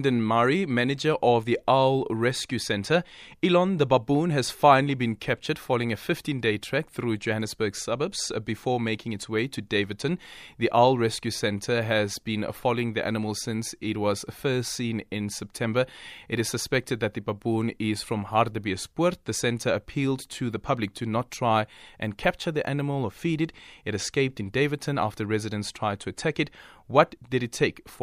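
No audible technical faults.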